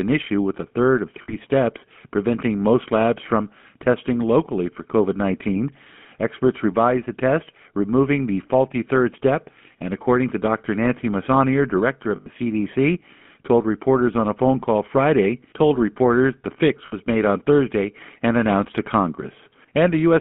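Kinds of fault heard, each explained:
GSM full-rate codec: Throughout, a pulse-driven vocal-tract model gives the speech a buzzy, gravelly roughness. The band is cut to about 150 Hz to 3.4 kHz.
Lost GSM frames: At 1.22 s after "with a third of", at 12.16 s, and at 16.86 s after "told reporters the fix", a repeated last frame rings metallically for 60 to 100 ms.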